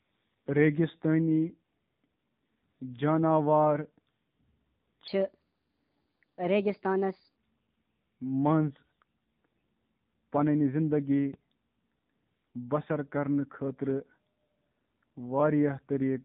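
AMR narrowband mobile codec, present from start to finish: the speech has been squeezed through the 2G/3G phone codec, which keeps only a band up to 4 kHz and rebuilds each 20 ms frame from a vocal-tract filter excited by a handful of pulses. The damage is plainly audible: dull, boxed-in consonants and a buzzy, synthetic edge to the voice. That degree of coarseness points to a low mode of around 7.4 kbps.

Section at the wrong speed, from 5.08 to 7.36 s: for these two and a quarter seconds the speech runs 1.3 times too fast, so it sounds hurried and chipmunk-like, raised by roughly five semitones. Tempo and pitch jump together at the start and drop back together at the end, with no gradual slide. The likely cause is that this stretch was played or rendered against the wrong clock rate, so timing and pitch shifted as one.

DC step at 11.34 s: the waveform's zero line jumps suddenly to a new offset. 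That jump is heard as a single low thump, while the speech itself carries on unchanged. The offset does not hold. It bleeds away slowly, in the way a high-pass filter near 5 Hz would pull the baseline back to zero. Because that recovery is far too slow to hear as a tone, the audible effect is just the one dull knock.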